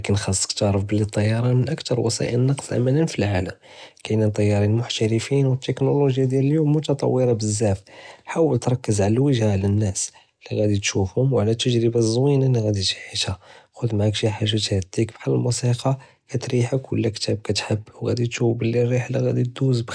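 No technical faults can be heard anywhere in the recording; the speech signal stays intact and continuous throughout.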